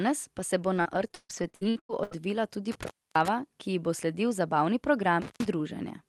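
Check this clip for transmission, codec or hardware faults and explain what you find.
The speech has a burst of dropouts early on and two brief cut-outs later, all carried over a call codec whose top end stops near 12 kHz, which fits Opus at around 32 kbps.

Repeated packet loss (robotic sound) runs from 0.77 to 2.21 s. Packets went missing again and again, and each hole was bridged by stretching the preceding sound. Nine gaps, the longest 142 ms, leave about 40% of the stretch concealed, so the speech turns choppy, with pieces missing.

Intermittent contact occurs at 2.72 to 3.28 s and again at 5.22 to 5.46 s. A loose connection opens briefly, for about 295 ms and then 129 ms. The signal drops out with crackle at each edge, and faint hiss fills the open moment.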